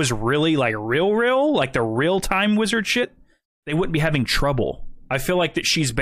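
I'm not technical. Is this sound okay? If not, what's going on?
No, there are two spots where compressed frames were skipped: at 3.02 s, right after "the real time wizard", and at 4.62 s, after "they wouldn't be having". Compressed audio is stored in short chunks called frames, here about 23 ms each. At these points some chunks never played, so the sound jumps ahead: about a tenth of a second at the first spot and about a twentieth at the second, which fits roughly four and two missing frames.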